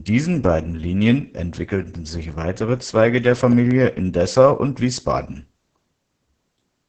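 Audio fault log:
throughout  Opus voice compression: The speech sounds muffled, hoarse and faintly robotic because the SILK voice coder models it with coarse linear prediction and a crudely coded excitation, a heavy level of damage that fits a bitrate near 10 kbps. On a spectrogram, energy stops abruptly at the 8 kHz wideband ceiling. Harmonics look smeared and blotchy, with texture shifting in blocks that suggest 20 ms frames. The waveform shows no obvious gaps.
3.52–3.73 s  loud pop: Two sharp pops land within about 0.2 s of each other, peaking around 5 dB above the speech, which continues underneath. The likely cause is a sudden voltage step or pulse, for example from a plug, switch or static discharge, which the downstream circuitry shapes. On the waveform, two tall spikes stand clear of the speech envelope. On a spectrogram, each shows as a thin vertical stripe spanning the whole band.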